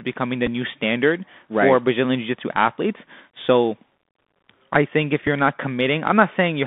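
This is speech carried over a Bluetooth headset link, and the Bluetooth CVSD headset codec colours all of it. The band sits roughly between 200 Hz and 3.6 kHz, so everything above that is gone. The one-bit delta coding, at a rate consistent with 64 kbps, is plainly audible: s sounds come out scratchy, louder bright passages distort where the step size can't keep up, and a granular hiss rides under the voice. There are also two Bluetooth headset packet repeats, where lost packets were filled by decoding the previous packet again. The first falls at 0.47 to 0.49 s, between "becoming the" and "new standard right for". It covers about 7.5 ms, which fits two repeated 3.75 ms packets. The second comes at 5.27 s, after "I think if" and before "you're not". It's about 3.8 ms long, consistent with a single repeated packet, and gives just a small tick.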